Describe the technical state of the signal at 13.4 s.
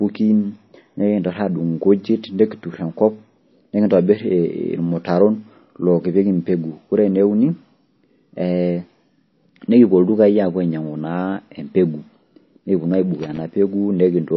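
At 13.4 s the signal is right at the end of an irregular burst of crackle and scratching that runs from 13.15 to 13.41 s. This is loose connector crackle: a worn or dirty contact in the chain kept making and breaking as it moved, chopping the audio on and off.

Underneath, the speech has plainly audible codec damage, with a watery, swirling texture and nothing above 5.8 kHz. The likely cause is MP3 compression at a low rate, consistent with roughly 24 kbps: with too few bits, the encoder drops weak frequency lines frame by frame and cuts the treble at a fixed point.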